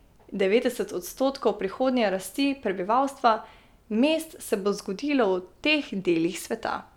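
Nothing technical goes wrong anywhere in this bit of speech, so there's no fault to point to at any moment.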